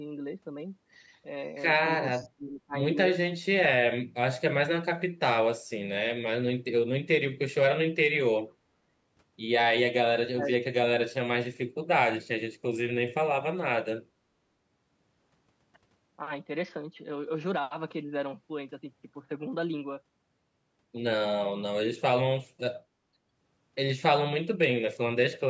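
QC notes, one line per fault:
2.16–2.28 s, echo leak: a faint delayed copy of the speech, about 25 dB below it and trailing by roughly 470 ms, slips through briefly. The likely cause is a far-end loudspeaker echo canceller that failed to fully remove its microphone's pickup, sending a residue back.
2.19–2.74 s, 3.41–3.60 s, 10.31–10.54 s, speech suppressed in double talk: the speech dips sharply in pieces, by roughly 25 to 35 dB at its deepest. This is likely the echo canceller confusing overlapping talk with echo and ducking both.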